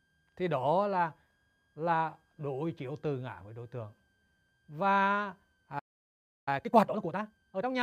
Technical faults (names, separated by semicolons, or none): switching supply whistle; playback stall; time-compressed catch-up